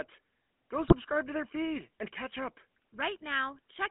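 GSM full-rate codec damage runs through the whole recording, plainly audible from start to finish. The codec rebuilds speech from a vocal-tract filter excited by regularly spaced pulses, discarding two of every three excitation samples, so the voice takes on a buzzy, gravelly roughness. The sound sits in a telephone band of 250 Hz to 3.4 kHz, with the highs and lows removed. The texture points to the 13 kbps full-rate coder.

GSM bit errors strike from 0.88 to 0.96 s, just before "to their feed and". Corrupted bits reached the decoder and scrambled the filter, pitch and gain parameters, so the spectrum warps and the level lurches for the affected frames. The result is a brief burst of squawking, gargled distortion. Its length fits about four damaged 20 ms frames, with a bit error rate of around 1.5 percent on a weak radio link.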